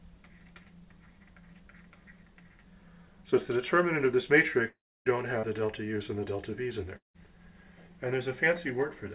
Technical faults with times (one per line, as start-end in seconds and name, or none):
4.68-5.07 long network dropout
5.39-5.45 short concealed packet loss
6.97-7.16 long network dropout